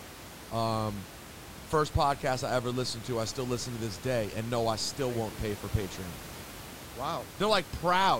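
No technical faults can be heard anywhere in this speech clip. The room noise behind the talker is audible, sitting about 15 dB below the speech, and belongs to the recording space rather than to any fault in the system.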